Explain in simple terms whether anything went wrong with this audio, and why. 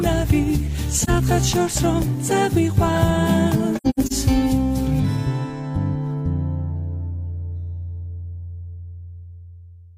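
Two short dropouts, both AAC frame loss with muting. At 1.01 s the sound dips briefly for about 43 ms, which fits a single lost chunk of compressed audio. The player had nothing to decode there and filled it with silence. From 3.76 to 4.12 s there's a rougher stretch: several gaps adding up to about 213 ms, the longest around a tenth of a second, which points to roughly five lost chunks. The edges fade softly.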